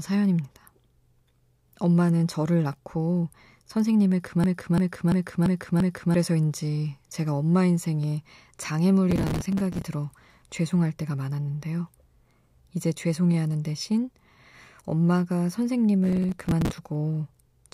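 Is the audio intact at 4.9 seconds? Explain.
No. From 4.44 to 6.14 s the speech locks into a stutter: one 0.34 s fragment plays five times in a row, a mechanical repeat at about 2.9 per second, and roughly a second and a half of real audio never appears. This is a system hang loop. The computer or driver stalled while the sound hardware kept replaying the same ring buffer, whose length fits a 16384-sample buffer.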